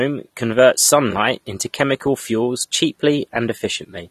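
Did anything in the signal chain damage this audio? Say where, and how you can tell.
Yes. The damage sits at the codec stage and runs through the whole speech clip. The sound is plainly dull and smeared. Nothing is present above about 13.1 kHz, a hard ceiling rather than a natural roll-off. Sibilants and sustained sounds carry a fizzy, warbling texture. This is likely AAC compression, AAC-LC at a low rate, which fits roughly 32 kbps. Starved of bits, the encoder lowers its cut-off and quantises coarsely, leaving spectral holes that smear the detail.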